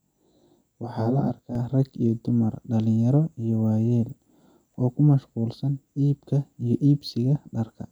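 From 0.0 to 1.55 s the speech shows channel delay with comb filtering. One channel runs about 20 ms behind the other, and the mono sum cancels at evenly spaced frequencies from around 30 Hz upward. The sound turns rough and slightly doubled.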